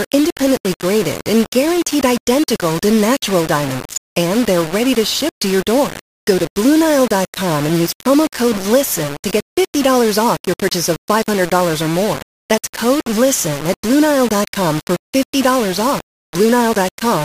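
From start to finish the speech carries a coarse, grainy distortion that rises and falls with the voice itself. Syllables sound rasped, and the quietest moments either vanish abruptly or sputter between two fixed levels instead of fading smoothly. The error sits only around 15 dB below the speech, so it is never far from the foreground. The likely cause is low bit depth without dither, with samples simply rounded to a handful of levels, which fits a 4-bit signal. Because no noise was added to decorrelate the rounding, the error tracks the waveform rather than forming a steady hiss.

At 10.84 s a short swish of static cuts across the speech and clears by 10.92 s, lasting about 75 ms. This is a wireless microphone noise hit. The radio link from an analogue FM transmitter briefly faded as reflected signals cancelled at the receiver. With too little carrier, the receiver's own noise rose up through the audio, producing that sudden burst before the signal recovered.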